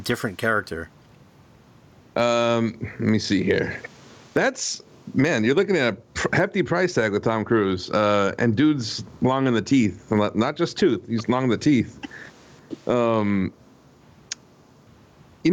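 Throughout the speech, gain pumping is audible: the level ducks under every loud syllable, a swing of roughly 20 dB. The likely cause is input gain set far too high, with a fast limiter pulling it down, which squashes the dynamics.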